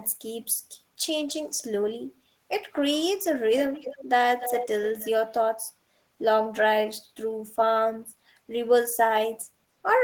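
Echo leak at 3.74–4.03 s, 4.40–4.67 s and 4.99–5.09 s: a copy of the speech trails it by 293 ms, about 15, 10 and 25 dB down. This is likely a far-end loudspeaker whose echo canceller let some microphone pickup through.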